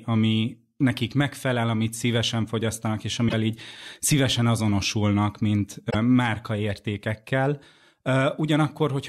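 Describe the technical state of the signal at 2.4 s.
The speech signal at 2.4 s is intact, with no audible technical fault at that moment.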